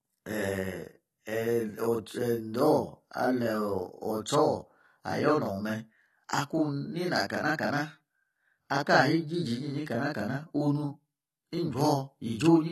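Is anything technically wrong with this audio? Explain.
Yes. Two faults run through the whole speech clip.

The first is a channel delay (doubling). Every syllable is followed about 43 ms later by a second copy at the same level, so the speech sounds doubled, with a short slap trailing each onset. One channel arrives late by a long buffer, which fits a 2048-sample buffer, and when the two channels are summed to mono the late copy stands apart instead of blending.

The second is plainly audible codec damage. The speech sounds dull and smeared, with nothing above 13 kHz, and sibilants and held vowels carry a warbling, fizzy texture. The likely cause is AAC compression at a low bitrate, around 32 kbps. The encoder pulls its cut-off down, discards or roughly quantises spectral detail, and patches some bands with substitute noise.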